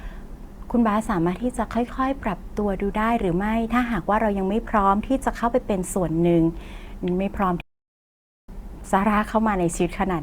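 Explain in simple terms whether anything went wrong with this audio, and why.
Something did go wrong: at 7.61 seconds the speech suddenly cuts to silence mid-flow and only resumes at 8.49 seconds, a gap of about 0.87 seconds. This is a playback stall, likely caused by the player running out of data or being held up before it could send more sound out. Unlike a brief dropout, which is a tiny blip, this silence lasts nearly a second, and it doesn't sound like a natural pause in talking.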